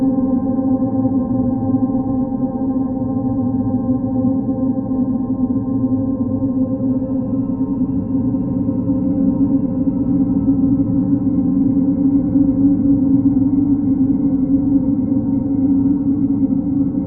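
No technical faults are audible anywhere in the recording.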